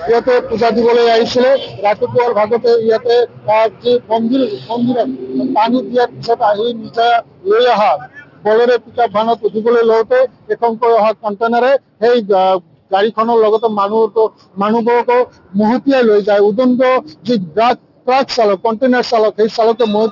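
Aliasing runs through the whole clip: the audio was brought down from 44.1 kHz to 12 kHz with no anti-alias filter, so everything above the 6 kHz fold point reflects back as false, unrelated tones, roughly 25 dB below the signal, which turn sibilant or bright content gritty and metallic. A spectrogram shows energy packed hard against the 6 kHz ceiling with mirrored stray components beneath it.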